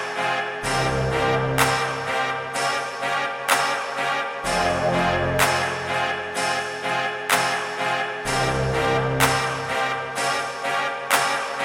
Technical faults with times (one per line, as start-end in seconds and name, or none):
none